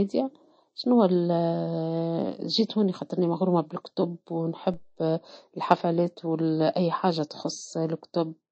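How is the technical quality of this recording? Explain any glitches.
The recording has two faults: one coding fault running through the whole speech clip, and a single glitch just after the midpoint.

Throughout, the speech sounds like low-bitrate audio saved at a high bitrate. The spectrum stops dead at 8.3 kHz, and the swirly, smeared MP3 artefacts of a heavy encode remain. This points to an MP3 at roughly 35 kbit/s that was likely re-saved as a 320 kbit/s MP3. The second pass can't restore what the first removed. A genuinely low-bitrate file would show the same damage, but the large file size here is the mismatch that gives the re-encode away.

At 4.74 s there is a DC step. The waveform's zero line suddenly jumps to an offset, which is heard as a brief low thump while the speech carries on unchanged. The offset then drains away slowly, consistent with a high-pass around 2 Hz pulling the baseline back toward zero. 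A dropout would leave a gap in the sound, and this doesn't. An ordinary click has no lingering shift in the baseline, and this one does.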